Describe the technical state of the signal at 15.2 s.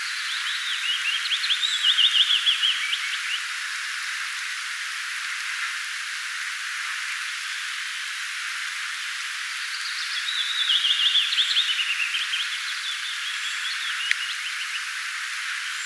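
At 15.2 s the signal is intact, with no audible fault at that moment.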